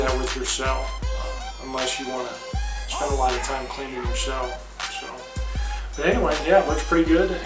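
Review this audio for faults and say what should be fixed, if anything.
Nothing here needs fixing; no faults were heard.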